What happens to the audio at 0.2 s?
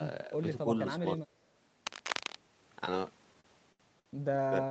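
Nothing goes wrong at 0.2 s: the speech there comes through intact, carrying only the ordinary band limit of the call path, with nothing above about 8 kHz.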